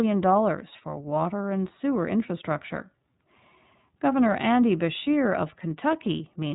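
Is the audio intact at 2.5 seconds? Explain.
No. At 2.5 seconds the speech carries iLBC codec damage, as it does for the whole clip. Nothing above about 3.8 kHz survives, so the sound is dull and narrowband. The codec rebuilds each 30 ms frame's excitation independently of the previous frame. That gives the speech a plainly audible rough, slightly synthetic texture. The quality fits iLBC's 13.33 kbps mode.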